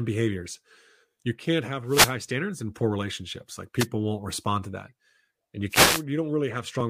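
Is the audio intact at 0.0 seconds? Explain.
Yes, at 0.0 seconds the audio is intact, with no audible fault at that moment.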